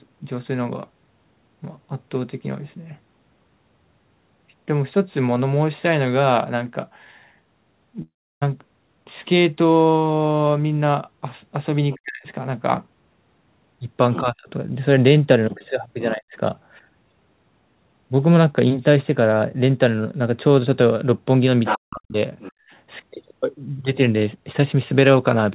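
At 8.02 s, a likely long network dropout hits. The last sound stretches into a fading buzz, then silence. Speech returns at 8.43 s, with about 0.4 s lost.

At 11.91 s, a faint scrap of the other side's voice leaks through, likely from loudspeaker echo left behind by the canceller. From 11.94 to 12.27 s, the talker's speech is likely suppressed in double talk, dipping sharply.

The same pairing recurs. Leakage appears from 14.13 to 14.20 s and from 16.00 to 16.12 s. Suppression runs from 14.21 to 16.35 s, with the speech cut out in pieces.

From 21.64 to 22.52 s, the leak is loud, nearly level with the speech. The speech drops away from 21.74 to 22.16 s.

At 22.52 s, the background is gated by the echo canceller. The room sound falls by about 40 dB for roughly 0.2 s, then returns.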